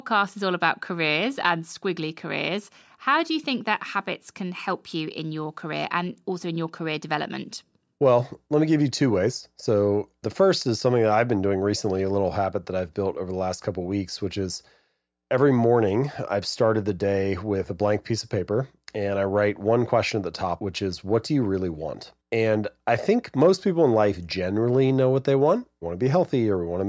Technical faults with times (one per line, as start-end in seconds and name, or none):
none